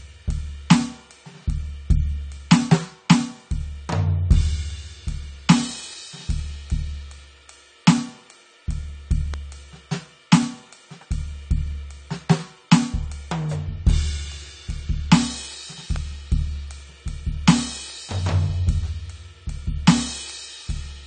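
From the start, the music sounds dull and smeared, with nothing above 9 kHz. This is likely AAC compression, at a low bitrate that fits about 32 kbps. At 9.34 s and 15.96 s, a sharp snap cuts across the music. Each is likely an electrical switching spike picked up by the audio line.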